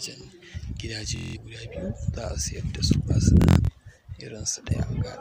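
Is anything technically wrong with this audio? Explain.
Yes. From 1.16 to 1.37 s and 3.37 to 3.71 s the sound buzzes in a machine-gun stutter, then jumps ahead. This is Bluetooth stutter: late or lost packets made the receiver replay its last short buffer, dropping about 190 and 210 ms. The second stutter comes in scattered bursts, the longest about 90 ms.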